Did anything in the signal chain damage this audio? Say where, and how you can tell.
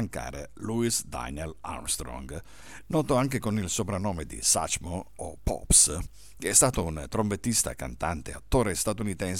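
No, nothing in the signal chain damaged this audio.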